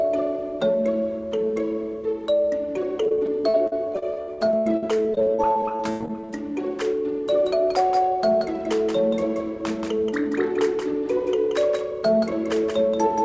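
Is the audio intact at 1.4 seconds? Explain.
Yes, the audio at 1.4 seconds is intact, with nothing there beyond the ordinary sound of a WebRTC call path.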